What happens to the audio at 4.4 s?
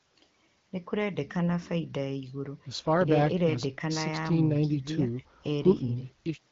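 Nothing goes wrong at 4.4 s: the speech carries on intact through that moment, with only the band-limited sound of the AMR wideband (HD Voice) codec it travels through.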